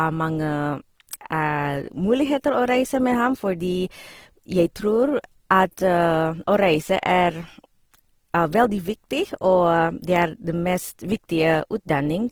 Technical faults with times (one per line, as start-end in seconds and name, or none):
0.00-12.31 Opus compression